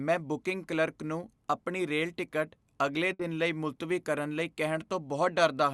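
At 3.13 s a burst of packet loss breaks the speech. Several packets in a row never arrived in time. The receiver fills the hole by stretching the last sound it had and turning it down. That concealment runs for about 60 ms and is heard as a brief smeared, fading tail. Playback then resumes at 3.22 s with about 60 ms of speech skipped, so the words jump forward. The call path's Opus coding at 64 kbps, with a top end cut near 12 kHz, carries through the concealed stretch too.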